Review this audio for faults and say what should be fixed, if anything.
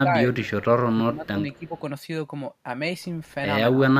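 The speech level dips at 0.02–0.13 s, 0.33–0.56 s, 0.91–1.73 s and 3.73–3.80 s. The drops range from slight to roughly 15 dB, and the longest and deepest is the stretch near 1 s. The pattern points to speech suppressed in double talk: the far side was likely talking at the same time, and the echo canceller could not tell the local voice from loudspeaker echo, so it attenuated everything. Preventing this means tuning the canceller's double-talk detector so it keeps near-end speech at full level while the far end is active.

Two faint repeats of the speech appear at 0.43–0.50 s and 1.53–1.59 s, arriving 260 ms behind the original and sitting roughly 30 dB or more below it. This is echo leak: a loudspeaker endpoint's echo canceller likely failed to remove all of the signal its microphone picked up, and the residue was transmitted back as a delayed copy. Preventing this means giving that endpoint's canceller a longer tail and stronger residual-echo suppression, or switching the endpoint to a headset.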